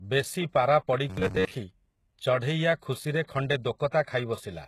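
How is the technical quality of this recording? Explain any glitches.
The technical quality is compromised in two ways: a dull, band-limited character that runs through the whole speech clip, and a brief robotic passage near its start.

Throughout, the file is most likely low-bitrate audio saved at a high bitrate. The sound points to a first pass through a very low-bitrate codec, around 16 kbit/s, followed by re-encoding as a roughly 192 kbit/s MP3. The larger second encoding cannot restore what the first discarded, so the audio stays muffled, with nothing above about 12.3 kHz.

From 1.10 to 1.51 s, the speech turns into a rigid metallic buzz, most likely robotic sound from repeated short buffers. New audio was not arriving often enough, so playback kept looping the last fragment while real audio was skipped. The buzz sits at 93.8 Hz, which fits a buffer of roughly 10.7 ms. About 70% of that stretch is repeated audio, leaving only a rough outline of the speech.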